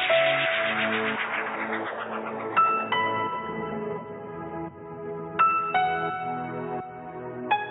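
At 1.36–1.56 s and 3.52–3.72 s, frames out of order: two adjacent blocks of about 93 ms each were decoded swapped, consistent with four-frame runs. Each stretch plays with its halves exchanged, giving a garbled flutter and no lost time.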